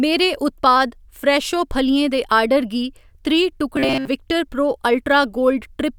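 A speech clip with robotic sound from repeated short buffers between 3.76 and 4.08 s: speech collapses into a rigid metallic buzz fixed at 133 Hz, most likely from a roughly 7.5 ms buffer looping while most real audio is skipped. Unlike codec warble, the buzz pitch never moves.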